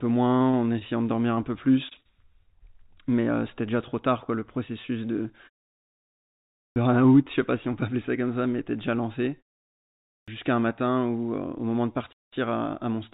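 Clipped start after a pause at 6.51 s and again at 10.02 s: each time, about a quarter of a second of sound is lost, 0.25 s and 0.26 s, right where speech resumes after silence of 1.1 s and 0.68 s. The output device appears to drop into a low-power state during the pause and needs time to wake and lock before it plays again, so "je sais pas si" and then "jusqu'à un matin où" burst in abruptly with their opening sounds missing.

Gap between chunks at 12.13 s: just after "au moment de", a 0.2 s hole of silence with hard edges cuts into the sound. No sound is lost; it is pushed back by the pause. The break is consistent with audio delivered in roughly 6-second chunks and a join where padding or a late chunk start left dead air. The telephone-band limit, with nothing above 4 kHz, comes from the call codec path.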